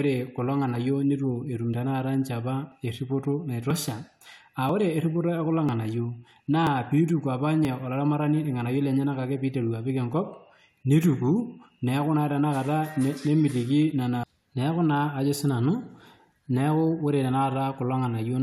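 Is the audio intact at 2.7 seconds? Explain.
No. At about 2.72 s an overlap between stream segments removes roughly 13 ms of speech: overlapping time stamps at a segment boundary, which fits 1-second segments, make the player discard real audio. It sounds like a tiny skip, seen as a waveform discontinuity and a thin vertical broadband line on a spectrogram.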